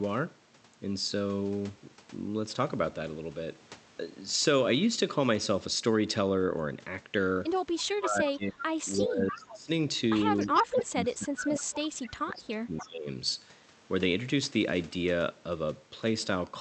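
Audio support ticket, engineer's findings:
Speech suppressed in double talk, 7.85–8.7 s, 8.96–9.69 s, 10.43–13.1 s. Near-end level ducks about 25, 20 and 30 dB, last span roughly 2 s affected. Likely echo canceller suppressor clamping both talkers during overlap. Unlike packet loss: gain pumps down with overlapping talk rather than cutting to hard, fixed-length gaps.

Echo leak, 8.98–9.02 s, 9.32–9.47 s, 10.39–10.58 s, 12.77–12.86 s. Delayed copy of the talker, 295 ms late, about 15, 10, 20 and 15 dB under the speech. Likely residual from a loudspeaker-side canceller not fully converged. Unlike room reverb: a discrete repeat at a fixed 0.3 s lag, not a smooth decaying tail.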